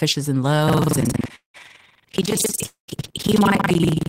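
Buffer tearing runs from 0.65 s to the end of the speech. Writer and playback position cross inside each period, so around two fifths of every buffer replays audio from roughly 150 ms earlier. Each period is spliced with hard joins, giving a robotic 21.5 Hz rattle that fits a 2048-sample buffer.

Call audio freezes occur at 1.35–1.56 s and 2.66–2.90 s. The last sound is stretched into a fading buzz that ends in silence (120 ms, then 130 ms). Speech then resumes where it stopped, 186 ms and 222 ms late, with nothing lost. The likely cause is delayed packets draining the jitter buffer.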